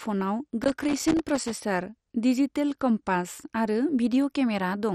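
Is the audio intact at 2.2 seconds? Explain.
No. At 2.2 seconds the speech carries the same damage heard across the whole clip: a dull, gurgling, granular texture with nothing above 13.8 kHz, and upper bands that flicker in and out. The likely cause is MP2 compression, which fits a low rate near 56 kbps. Too few bits shut off whole sub-bands and coarsely quantise the rest. A plain low-pass filter would sound dull but clean, without this gritty band flicker.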